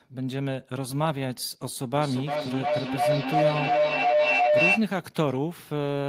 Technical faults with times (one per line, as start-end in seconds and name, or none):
1.94-4.91 feedback howl